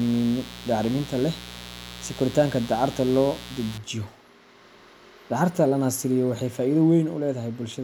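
From 0.0 to 3.78 s, a mains buzz sits under the speech. It is a raspy 60 Hz hum whose harmonics reach several kHz, sitting fairly loud beneath the signal.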